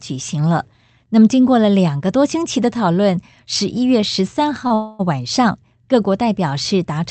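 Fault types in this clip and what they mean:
Short stall from a late packet: Between 4.67 and 4.72 s the sound is held about 28 ms too long, with a slight buzzy smear, because the jitter buffer ran empty when a packet arrived late. The receiver stretched the last sound until the packet came, then resumed from the same point. Nothing is lost, but playback now runs about 28 ms behind where it was.
Call audio freeze: From 4.74 to 5.01 s the sound stops progressing and is replaced by a continuation of the preceding sound that turns into a buzz or hiss and fades without reaching silence. The likely cause is packets held up in transit, which left the jitter buffer empty for about 250 ms. When they arrive, playback picks up where it stopped, so a 250 ms gap is inserted and nothing is missing.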